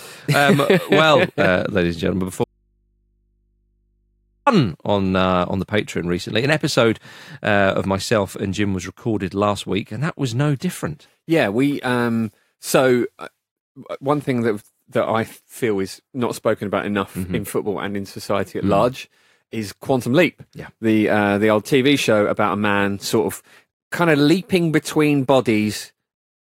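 Audio dropout to a faint residue from 2.44 to 4.47 s in this speech clip: the speech cuts abruptly for about 2 s, leaving only mains hum roughly 45 dB down, likely from a live but disconnected input.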